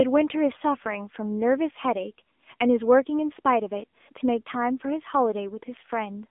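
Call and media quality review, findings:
AMR narrowband mobile codec, full clip. Speech buzzy and synthetic, band held to about 250 Hz to 3.6 kHz, nothing above 3.8 kHz. Points to AMR-NB at a low mode near 7.4 kbps. Few excitation pulses per 5 ms subframe, so texture is lost.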